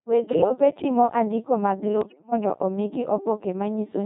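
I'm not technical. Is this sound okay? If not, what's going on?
No. Two problems can be heard.

The Codec 2 vocoder runs through the whole clip. It is a digital-radio system that doesn't send the actual voice at all. It sends a few clues, such as pitch, loudness and the rough shape of the sound, and then rebuilds the speech from simple tones at the other end. That is why the voice sounds robotic and buzzy throughout, and here the damage is heavy.

Bit errors on digital voice radio hit twice: from 0.32 to 0.50 seconds, just before "timo andiko mag", and from 2.02 to 2.32 seconds, just after "timo andiko mag". Roughly one bit in ten arrived flipped, the kind of corruption you get at the edge of radio coverage. Because each bit steers the pitch, loudness or tone of a whole slice of speech, the rebuilt voice lurches and breaks into warbles and bleeps at those moments.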